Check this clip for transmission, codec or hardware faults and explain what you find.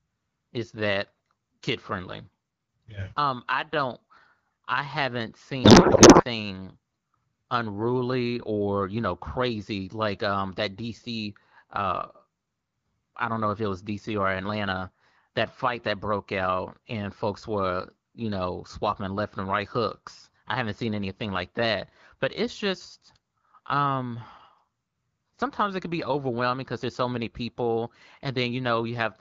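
One transmission fault is present: a codec payload misread from 5.64 to 6.25 s, just after "I haven't". The receiver unpacked octet-aligned AMR frames as if they were bandwidth-efficient, so every field landed in the wrong place. For that stretch the speech becomes garbled noise and warble that barely tracks it. Around this, the AMR wideband (HD Voice) codec carries the speech clearly, which fits a rate of about 12.65 kbit/s.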